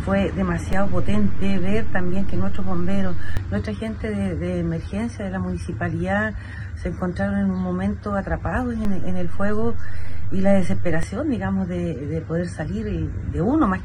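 A DC step shifts the waveform's zero line at 0.73 s by about -14 dBFS, holding until it returns at 3.37 s; a second, about -16 dBFS, runs from 8.85 to 11.03 s. Each jump and return gives a low thump while the sound continues unchanged.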